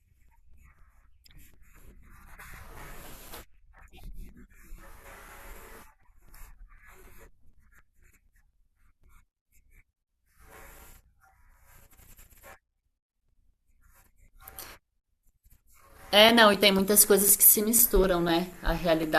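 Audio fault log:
0.29–19.04 s: periodic USB or driver dropouts. Every 0.25 s a gap of roughly 4 ms drops to silence, heard as steady ticks under the speech. The waveform shows evenly spaced notches, and the spectrogram shows thin vertical broadband lines at each break.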